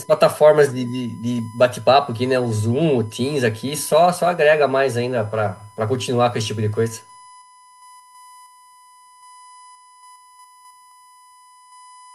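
A steady USB whine sits under the speech from start to finish, a fixed tone at 1 kHz, roughly 30 dB below the voice. It's the bus drawing current in 1 ms frames and that pulse leaking into the audio through power or ground.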